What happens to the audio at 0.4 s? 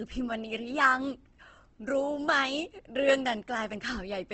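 At 0.4 s the speech is rough and grainy with nothing above 8.2 kHz, present throughout, likely Opus compression at a bitrate near 16 kbps, filling bands with noise.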